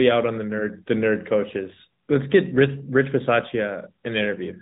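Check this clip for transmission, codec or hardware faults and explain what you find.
There's one codec fault, running through the whole speech clip. AMR narrowband mobile codec: sampling at 8 kHz leaves nothing above 3.9 kHz, and the pulse-driven vocal-tract model adds a plainly audible buzzy, synthetic edge, consistent with a mid-rate mode around 10 kbps.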